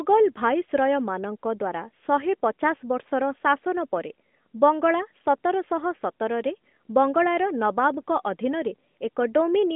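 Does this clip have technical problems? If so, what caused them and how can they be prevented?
No, no faults are audible.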